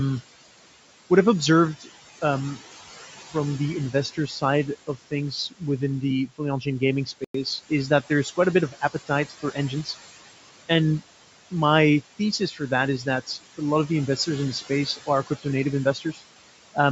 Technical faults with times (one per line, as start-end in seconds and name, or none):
0.00-16.92 noise suppressor artifacts
1.80-2.60 speech cut by the noise suppressor
3.93-5.62 speech cut by the noise suppressor
6.29-9.88 speech cut by the noise suppressor
7.24-7.34 Bluetooth stall
12.19-13.60 speech cut by the noise suppressor
14.17-16.77 speech cut by the noise suppressor